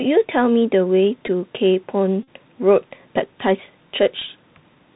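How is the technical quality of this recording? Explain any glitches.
The recording is plainly degraded narrowband speech with three short glitches.

The Bluetooth CVSD headset codec runs through the whole clip, and its damage is plainly audible. The codec sends one bit per sample, up or down, with an adaptive step, which fits a 64 kbps link. Nothing above 4 kHz survives, so the speech sounds muffled and boxy. The step cannot keep up with loud, bright sounds. S sounds turn scratchy, and a granular hiss sits under the voice.

Bluetooth headset packet repeats occur at 1.27 s, from 2.23 to 2.28 s, and at 4.20 s. When voice packets are lost between headset and phone, the chip decodes the last good packet again. The short gaps at 1.27 s (about 7.5 ms) and 4.20 s (about 15 ms) give brief buzzes. The longer run at 2.23 s covers about 41 ms. Repeating every 3.75 ms, it produces a short buzz near 267 Hz.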